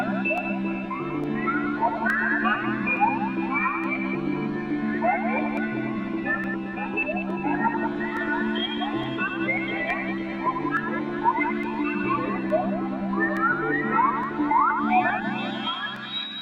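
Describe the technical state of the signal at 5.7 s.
At 5.7 s the audio is inside a run of regular clicks from 0.38 to 15.96 s, one every 0.87 s. These are likely clock drift buffer slips, where mismatched device clocks force a small sample block to be dropped or repeated. Their strict even spacing sets them apart from random crackle.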